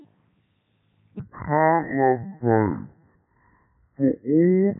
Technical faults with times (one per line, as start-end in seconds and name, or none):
0.00-4.79 Codec 2 vocoder
1.20-4.79 section at the wrong speed